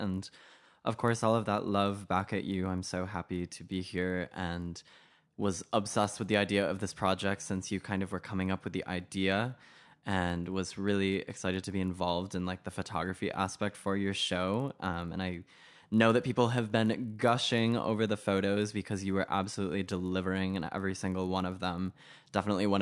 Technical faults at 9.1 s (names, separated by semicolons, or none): resampler restarted on every block